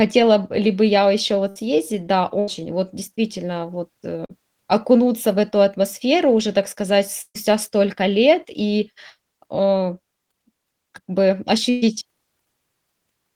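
Russian speech with four bursts of packet loss and one short concealed packet loss. The bursts come at 1.49–1.57 s after "ли бы я ещё", at 2.39–2.49 s just before "вот действительно вот", at 7.21–7.36 s, and at 11.70–11.96 s. Each time the receiver extends the last sound for roughly 60 to 130 ms while fading it, then skips ahead, so 60 to 140 ms of speech is simply gone. On a spectrogram the continued sound freezes into a flat, dimming patch before an abrupt jump. At 7.21 s the fill runs out into about 50 ms of flat silence in the waveform. At 11.70 s the patched region runs slightly long, by about 14 ms. The short concealed packet loss at 4.25–4.31 s, between "вот действительно вот" and "окунуться в эту атмосферу", loses about 40 ms that the decoder bridges with a synthetic continuation and then crossfades back. It is heard as a brief smear, and it shows as a short smudged patch where the formant detail blurs without a visible gap.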